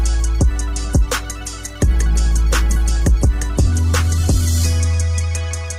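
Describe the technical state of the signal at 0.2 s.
At 0.2 s the signal is intact, with no audible fault at that moment.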